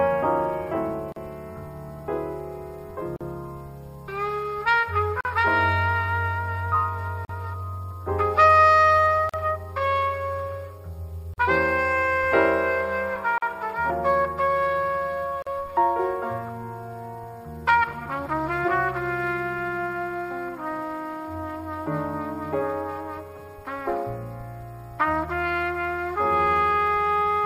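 Gaps at joins of encoded pieces open at 1.12, 3.16, 5.21, 7.25, 9.29, 11.34, 13.38 and 15.42 s, repeating every 2 s. Each separately encoded piece kept its start delay and final-frame padding, leaving a 40 to 43 ms smeared dropout before the sound resumes.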